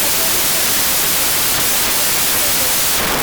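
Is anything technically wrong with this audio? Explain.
Yes. The whole clip has a wrong sample width fault. Speech written as 16-bit integers is being read as packed 24-bit integers. Most values mix bytes from neighbouring samples, producing loud harsh noise. The buried speech runs 1.5 times too fast and sounds higher in pitch.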